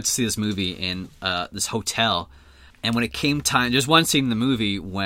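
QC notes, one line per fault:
No faults found. Nothing in this speech clip calls for a QC note.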